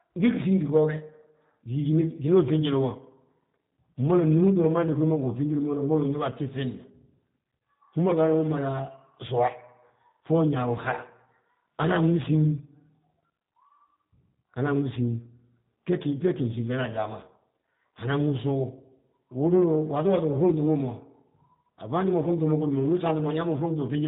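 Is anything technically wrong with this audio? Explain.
Yes. Throughout the speech there is plainly audible G.729 codec damage. The coder models each 10 ms frame with a vocal-tract filter, a pitch predictor and a few fixed pulses, and discards everything above about 3.8 kHz. The character of the sound fits a low-rate coder of this kind at around 8 kbit/s. The result is a narrowband, muffled top end. Voicing comes across as slightly rough and synthetic, and any background noise warbles.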